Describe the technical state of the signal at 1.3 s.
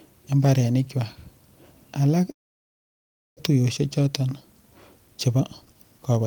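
At 1.3 s the speech signal is intact, with no technical fault present at that moment.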